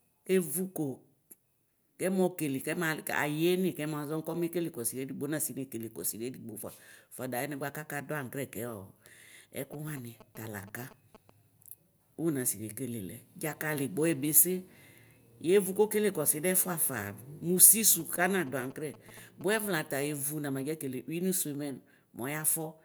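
GSM signalling bursts intrude from 9.73 to 11.30 s and again from 18.00 to 19.66 s, at roughly 20 dB below the speech: a nearby phone's radio pulses, rectified by the audio circuit, give galloping ticks and short 217 Hz buzzes, gated on and off unlike steady mains hum.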